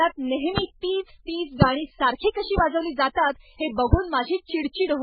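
Speech that has likely been through transcoding between lossy codecs, a very low-bitrate MP3 pass, around 8 kbit/s, then an AAC-LC re-encode near 32 kbit/s. Throughout, nothing survives above 5 kHz, and the first codec's artefacts are overlaid with the second's own coding noise.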